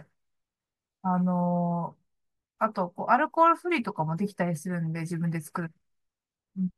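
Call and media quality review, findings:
Nothing stood out on listening to this speech recording that would warrant a finding.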